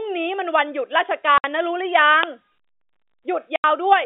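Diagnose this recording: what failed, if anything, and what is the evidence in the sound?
At the network stage, packets were lost and the receiver filled the gaps with silence. The speech drops out from 1.38 to 1.44 s (60 ms) and from 3.56 to 3.64 s (80 ms), holes that fit 20 ms packets, and each gap has abrupt edges.

In the driver or buffer stage, an uninitialised buffer was played before audio had been written to it, so leftover memory was heard as sound. At 2.23 s there is a short, loud crack lasting 0.67 ms, which fits a 32-sample block, over the G.711 telephone band of 300 Hz to 3.6 kHz.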